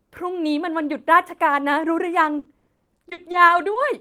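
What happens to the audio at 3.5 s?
At 3.5 s the speech turns choppy and robotic, with small pieces dropping out. This is repeated packet loss from 2.39 to 3.77 s: thirteen gaps, the longest 40 ms, each patched by extending the preceding sound, covering about a fifth of that stretch.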